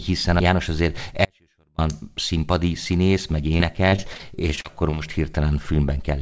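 At 1.25 s the speech just drops out, right in mid-flow, and stays gone until 1.78 s, roughly half a second of missing signal. It's an audio dropout to a faint residue. The gap isn't silent: there's a faint leak of sound sitting about 40 dB below the normal level. That abrupt cut and snap back, landing just before "színpadi színész meg", points to the wanted signal likely being lost while the path after the break stayed live.

Later, from 3.58 s to 5.01 s, after "színpadi színész meg", the speech turns choppy. This is repeated packet loss. There are about ten short holes in that stretch, the longest around 40 ms, and each is patched by stretching the last bit of sound before the next one arrives. Roughly 16% of the span ends up concealed, which gives that stuttering texture. The call path carries nothing above 8 kHz, which fits a G.722 wideband codec.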